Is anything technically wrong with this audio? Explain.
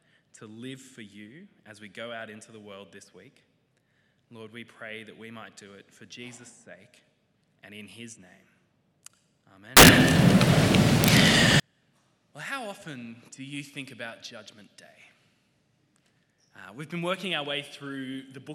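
Yes. From 9.77 to 11.60 s the samples are built from the wrong bytes: each value is assembled with its bytes misordered or shifted, so the rapidly changing low bits dominate. The result is loud, harsh broadband noise, close to white on loud passages, unlike ordinary added hiss, which stays steady regardless of the signal.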